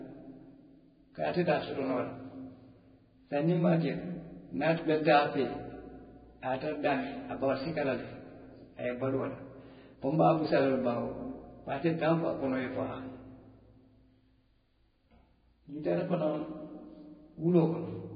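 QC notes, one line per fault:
throughout: Vorbis compression is the likely cause. The speech has nothing above 4.9 kHz, grainy hiss in the treble just below that cut-off and blurred consonant attacks, heavy damage that fits a bitrate around 16 kbps. A plain low-pass would leave that treble clean, not noisy.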